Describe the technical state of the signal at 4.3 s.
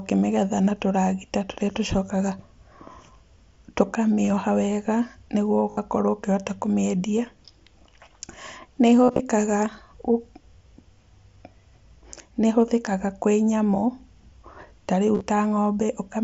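Concealed Bluetooth headset packet loss runs from 4.24 to 4.30 s. About 30 ms of sound is missing, spread over 60 ms in brief gaps of at most 15 ms, which fits several lost frames. The headset link dropped those packets, and the receiver filled each gap by repeating a closely matching recent stretch of the waveform. The result is a brief buzzy roughness. On a waveform it looks like short copied cycles, and on a spectrogram like thin harmonic smears with no visible gap.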